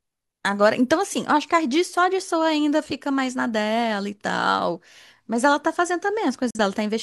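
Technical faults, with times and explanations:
6.50–6.59 s, digital broadcast dropout: the speech cuts out in a short hole near the end of the clip, with a fast fade of about 3 ms into silence and the sound returning a moment later. The receiver muted because a frame arrived damaged or failed its checksum. About 43 ms of programme is simply gone, which fits a single lost frame, so the sound jumps forward rather than resuming where it stopped.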